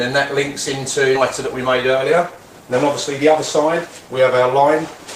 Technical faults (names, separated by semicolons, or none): skip ahead; jitter buffer speed-up